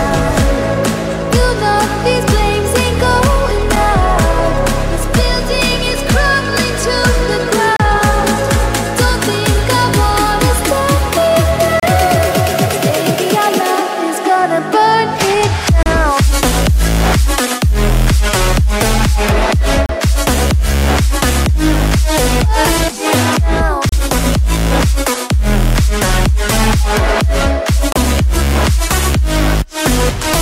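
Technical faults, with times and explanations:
3.76, 7.76, 11.80, 15.83, 19.86, 23.89 and 27.92 s: gap at a join of encoded pieces. Silence cuts in every 4.0 s, 6.7 ms first and 32 ms thereafter. The pieces were joined with each encoder's start-up delay and padded last frame left in, so the abrupt gap, its edges smeared by the codec, resumes where the sound stopped.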